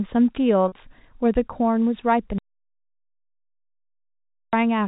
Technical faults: packet loss with pitch repetition; audio dropout to silence

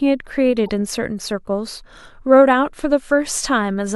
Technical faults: corrupt frame decoded

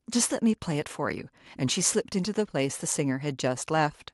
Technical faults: none

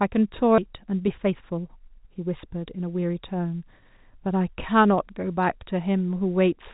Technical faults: skip ahead; jitter buffer speed-up

